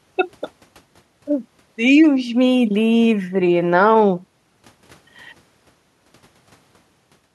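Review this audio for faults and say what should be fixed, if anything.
Nothing here needs fixing; the speech comes through without any technical faults worth flagging.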